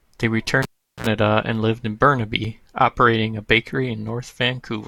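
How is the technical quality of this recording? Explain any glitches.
The recording has two technical faults.

From 0.63 to 1.07 s, just before "and lived in", there is a cable pulled and plugged in. A pop cuts the speech. About 0.39 s of near silence follows. A brief 60 Hz mains buzz, about 63 ms long, comes as the plug's tip makes contact. A second pop marks the sound's return.

At 2.45 s, between "and lived in" and "operating a", there is an overlap between stream segments. Two adjoining segments claimed the same moment. The player trimmed real audio there. A few milliseconds of speech vanish. The waveform jumps.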